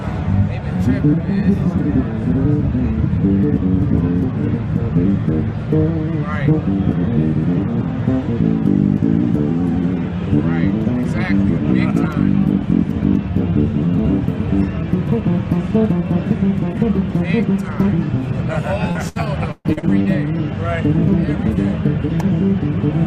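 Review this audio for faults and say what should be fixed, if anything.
Repeated packet loss (robotic sound) from 18.91 to 20.07 s: successive dropouts, longest 133 ms, patched by stretching earlier sound, giving choppy output; spectrograms show smeared, frozen bands broken by gaps. A larger jitter buffer and network forward error correction would prevent it.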